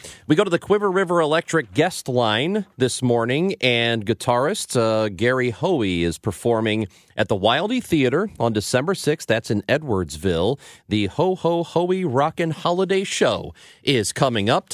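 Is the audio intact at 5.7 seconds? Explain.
Yes, the audio is intact at 5.7 seconds, with no fault at that moment.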